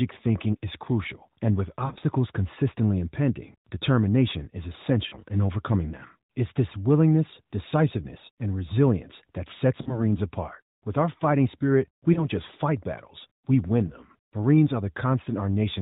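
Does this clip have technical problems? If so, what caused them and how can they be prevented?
Yes, there are lost AMR speech frames. Around 1.86 to 2.04 s, between "crucial and with" and "consistently impending determination is", several short dropouts are scattered over about 160 ms, with gaps of up to 40 ms. Smaller ones follow at 5.08 to 5.16 s (just before "in overcoming them"), 9.82 to 10.0 s, 12.14 to 12.26 s and 13.88 to 13.95 s (right after "battles we win"). Radio errors corrupted those frames, so the decoder re-used the last good pitch and vocal-tract settings at falling gain. That's why you hear brief warbles and dips rather than clean gaps. The underlying AMR narrowband encoding sounds light, consistent with the 12.2 kbps mode. To prevent this, improve radio link quality or use stronger channel protection, such as a more robust codec mode when the signal is weak.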